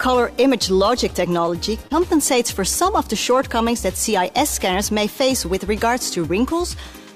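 At 1.87 s to 1.92 s there is a short concealed packet loss. About 20 ms of audio failed to reach the decoder in time. The receiver covered the gap with roughly 24 ms of invented signal, extending what came just before. It then blended back into the real audio. The result is a brief smear in the sound. Whatever fell inside those missing milliseconds is gone, replaced by a continuation of the preceding sound.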